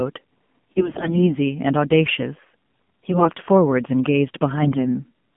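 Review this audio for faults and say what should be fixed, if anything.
The speech runs through the AMR narrowband mobile codec for its whole length. Nothing passes below about 150 Hz or above 3.4 kHz, and the voice has the buzzy, synthetic edge of a low-rate vocal-tract model rebuilt from a few pulses per 5 ms subframe. The degree of that damage fits the 7.4 kbps mode. Plain low-pass filtering would only sound muffled, without the buzz. To prevent this, carry the call over a wideband or higher-rate path.

AMR bit errors appear twice, from 0.72 to 1.38 s and from 3.03 to 3.45 s. In both spans the pitch and level hold roughly steady, but the voice turns hoarse, scratchy and gargly. That is what happens when flipped low-priority bits misplace the excitation pulses and skew the fine gain and spectral values. The first span has the higher error rate, near a tenth of bits against somewhat less in the second. 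A dropped frame would leave a gap or a smooth concealed stretch, but here the sound continues and is corrupted instead. To prevent this, improve link quality or apply stronger channel coding to the unprotected bit classes.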